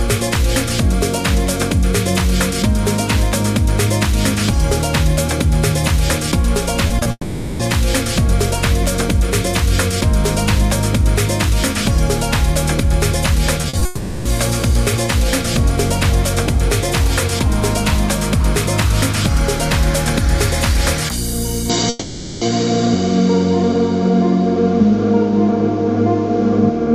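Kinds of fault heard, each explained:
Repeated packet loss (robotic sound): Short holes in the stream come one after another, each patched by briefly repeating the last sound. This gives a choppy, stuttering texture rather than one long gap. It happens twice. From 6.87 to 7.07 s there are three gaps totalling 60 ms, the longest 20 ms. From 13.61 to 13.83 s there are three gaps totalling 80 ms, the longest 40 ms.
Long network dropout: A single extended stretch where the sound is held and carried on artificially, then returns further on with that part missing. This is one long patch, not a cluster of brief ones, and is likely caused by a network outage. It occurs at 7.11 to 7.61 s (480 ms, ending in 40 ms of silence), at 13.85 to 14.27 s (400 ms) and at 21.89 to 22.43 s (520 ms).
Input switched to a poorer device: From 21.7 s to the end, the sound takes on a different character and never recovers, unlike the dropouts, which resume normally. 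Nothing remains above 7.8 kHz, the level shifts by around 5 dB, and a new background noise sits roughly 35 dB below the signal. There is no silence at the change. The narrower band and new noise point to a likely switch to another microphone or a headset's call profile.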